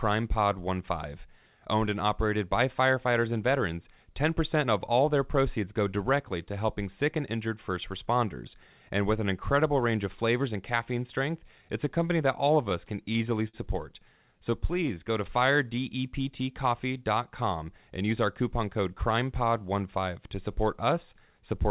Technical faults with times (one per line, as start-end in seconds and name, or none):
12.48-13.56 repeated stalls (stutter)
14.26-15.76 jitter buffer slow-down
14.39-14.91 scattered short gaps
17.73-19.18 jitter buffer speed-up